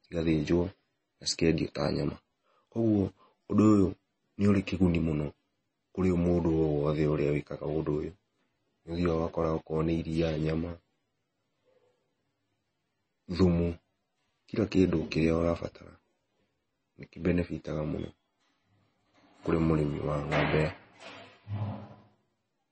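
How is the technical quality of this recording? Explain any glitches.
The recording is audibly degraded by heavy lossy compression throughout.

MP3 compression, likely at a very low bitrate in the region of 24 kbps, runs from start to finish. Starved of bits, the encoder has chopped off all treble above about 8.3 kHz and discarded quieter frequency components, letting them flicker in and out between frames. The speech therefore sounds dull and muffled, with a watery, swirling texture, metallic chirping on s sounds, and consonant onsets that smear rather than snap.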